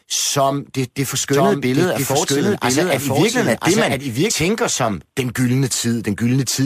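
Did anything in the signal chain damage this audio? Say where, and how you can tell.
Yes. From 1.33 s, right after "som det det", to 4.31 s, before "tænker som den", the speech plays twice as a doubled audio track, with a dry, full-band echo at the same level about a second behind that starts and stops abruptly. The likely cause is a second, slower capture path or an editing step that mixed in a delayed copy.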